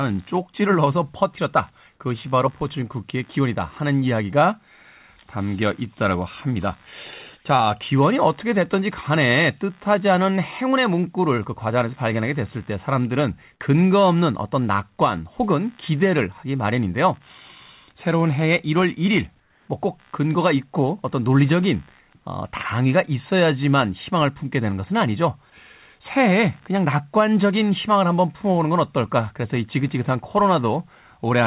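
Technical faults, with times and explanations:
Throughout, computer activity noise: there's a faint buzzy, chirpy texture pulsing at something like 70 times a second, sitting roughly 40 dB under the speech. Its rhythm doesn't follow the talking at all, which points to the processor or mouse shifting the shared ground of the audio circuit as load changes. It's quiet, and it sits alongside the narrow call-codec band that stops around 4 kHz.
19.40 to 19.68 s, comfort noise in place of the background: for about 280 ms the room tone loses its detail and turns into a smooth, featureless hiss, about 4 dB quieter than the real background around it. The likely cause is the sender's voice detector treating that stretch as silence and dropping out, so the receiver fills the pause with synthetic noise roughly shaped like the background until real audio resumes.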